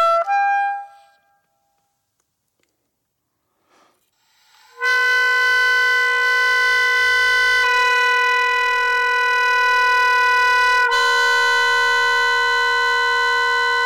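A harsh, fuzzy edge sits on every loud moment from start to finish. This is hard clipping: the signal is driven about 8 dB past what the stage can pass, so around a tenth of the waveform has its peaks sliced flat, spraying high harmonics.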